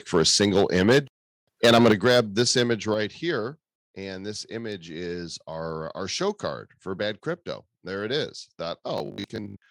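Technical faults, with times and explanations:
0.14–0.98 s and 1.64–2.72 s, microphone overload: the loudest syllables turn harsh and crackly, likely because the input ran about 7 dB and then about 11 dB past the converter's limit, flattening about 3% and then 5% of the samples.
0.93 s, 1.92 s and 2.94 s, microphone volume stepped down: voice and background drop abruptly by about 2 dB, 7 dB and 4 dB, likely the call software cutting input gain after those distorted peaks.
8.98–9.70 s, robotic sound from repeated short buffers: just after "it is", the sound becomes a rigid metallic buzz at 50 Hz, likely from a 20 ms buffer being repeated to cover late audio, replacing about half the real signal.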